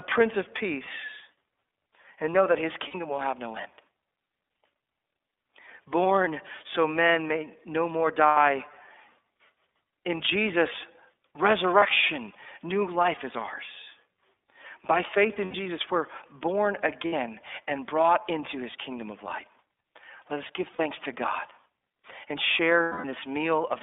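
The whole recording runs through the iLBC codec. The speech sits in a narrow band of roughly 300 Hz to 3.6 kHz. It sounds plainly rough and synthetic. The coding points to the 13.33 kbps mode, which fits 30 ms frames.

Lost iLBC frames leave seven short gaps. They fall at 2.88 s, 8.29 s, 11.79 s, 15.45 s, 17.07 s, 20.73 s and 22.83 s. They last 60, 90, 30, 90, 60, 60 and 210 ms. Each gap is a held, slightly buzzy or breathy vowel-like tone. The decoder repeats the last pitch cycle with noise, and speech recovers almost at once.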